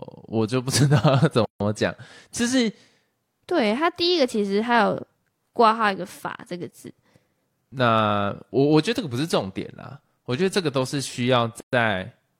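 At 1.45 s the speech stops dead for about 156 ms, and at 11.60 s it does so again for about 124 ms. Each is a gap at a join of encoded pieces: separately encoded segments were butted together with their encoder start delay and final-frame padding left in. The edges are smeared by the codec. Unlike a dropout, nothing is missing, because the speech resumes exactly where it paused, and the 10-second spacing marks the segment boundaries.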